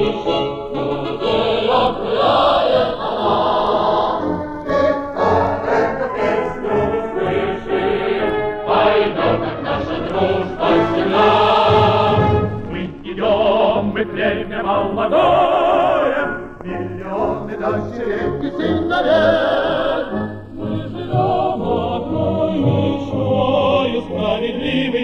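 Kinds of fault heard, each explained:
Channels drifting apart: The two channels were captured on devices running from separate clocks, and a rate mismatch on the order of 30 parts per million lets the delay between them grow steadily across the clip, to roughly 0.4 ms by the end. When the channels are summed to mono, that growing offset creates comb-filter notches that glide slowly down through the spectrum, reaching a lowest notch near 1.25 kHz. The result is a gradual, slow flanging sweep throughout.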